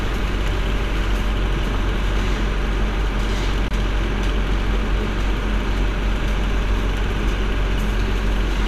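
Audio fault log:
3.68–3.71 s, gap at a join of encoded pieces: a gap of about 26 ms with smeared edges, where separately encoded segments were butted together untrimmed, keeping the padding.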